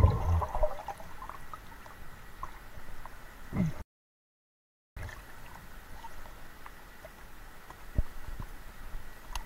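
At 3.82 s the output cuts to silence mid-flow and stays silent until 4.97 s, a gap of about 1.15 s, before the sound resumes. This is a playback stall, likely caused by the player running out of buffered data or its thread being blocked.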